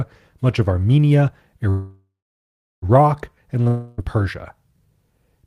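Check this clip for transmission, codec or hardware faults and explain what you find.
Two transmission faults are audible in this speech clip, both pointing to network trouble rather than the codec or hardware.

Call audio freeze, 1.69 to 2.85 s. The likely cause is packets held up in transit until the receiver's jitter buffer ran dry. The receiver stretched the last sound into a fading buzz and then held about 0.71 s of silence. When the packets arrived, the speech picked up exactly where it had stopped. Nothing is lost, but a 1.13 s gap is inserted, so everything after it plays that much later.

Long network dropout, 3.68 to 4.01 s. The likely cause is a stretch of audio that never reached the receiver. This time the fill lasts the whole 0.30 s, a fading buzz-like continuation of the last sound with no fall to silence. When the speech returns, it jumps ahead. The 0.30 s that went missing is skipped entirely and no delay is added.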